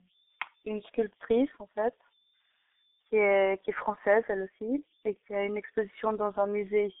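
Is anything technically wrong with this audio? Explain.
Yes. Two faults run through the whole speech clip.

The first is converter idle tones. A delta-sigma converter without dither settles into repeating bit patterns when its input is small. Those patterns form a steady tone, here somewhere around 4 kHz. It sits at about 37 dB below the speech. It shows as a faint, thin whistle in the pauses. Under quieter passages it turns into a grainy hiss.

The second is G.723.1 codec damage, and it is heavy. The line passes roughly 250 Hz to 3.6 kHz, with nothing above 3.7 kHz. The speech therefore sounds boxed-in and muffled. The codec works in long frames and updates its model of the voice slowly. That smears consonants and gives a hoarse, rough edge. The degree of damage fits a bitrate near 6 kbit/s.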